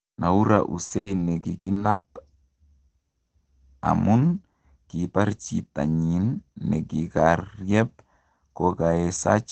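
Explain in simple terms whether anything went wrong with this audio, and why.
Between 0.55 and 2.06 s the sound turns choppy and robotic. This is repeated packet loss: eight chunks of audio arrived late or not at all, the longest 140 ms. Each gap was patched by stretching the previous sound, covering about a quarter of that stretch.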